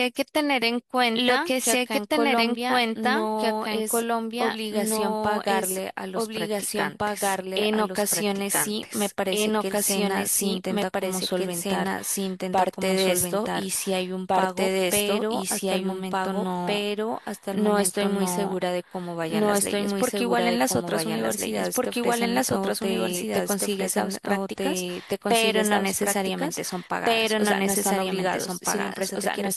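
Throughout the speech, a doubled audio track runs underneath: a second, full-band copy trails the original by about two seconds at roughly equal loudness, so every phrase is heard twice, overlapping whatever follows. Unlike an echo or reverb, the repeat carries no decay and no room colouring and does not fade over successive repeats. It is one clean duplicate, likely from the signal being captured again through a slower path.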